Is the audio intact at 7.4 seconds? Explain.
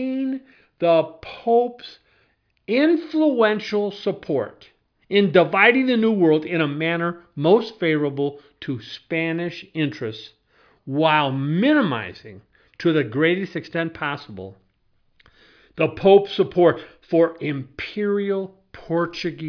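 Yes, the speech at 7.4 seconds is intact, with no dropout, click, distortion or other fault at that moment.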